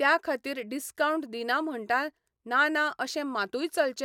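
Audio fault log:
Nothing stood out on listening to this speech recording.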